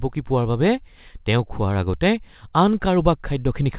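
The speech comes through a telephone-band call path with nothing above 4 kHz, which fits G.711 mu-law at 64 kbps working as intended, and no technical fault can be heard in the signal.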